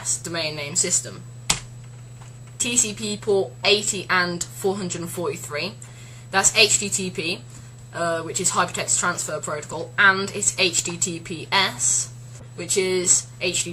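The audio has three brief glitches from corrupt frames decoded, at 5.82–5.90 s, 9.69–9.74 s and 12.39–12.46 s, peaking around −20, −20 and −30 dBFS. Damaged compressed frames were played as stray energy at wrong frequencies, whereas dropouts would leave gaps.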